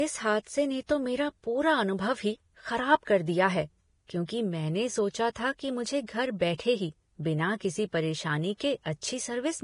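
The speech was likely encoded with Vorbis compression at a low bitrate that fits about 30 kbps. Nothing survives above 10.5 kHz, and the remaining treble is so coarsely quantised that detail becomes noise. The damage is heavy: hissy and grainy throughout, with roughened tones and blurred attacks.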